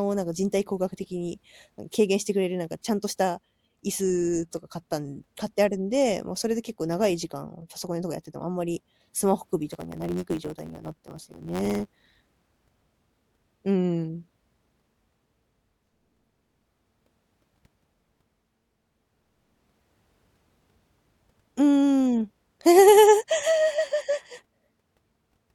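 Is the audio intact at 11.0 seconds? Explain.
No. From 9.71 to 12.89 s there is a block size mismatch (truncated): each block is written longer than the next stage reads, consistent with 512-sample blocks, and the tail is discarded. This produces a 91.9 Hz buzz, with the speech running 1.07 times fast at near-normal pitch.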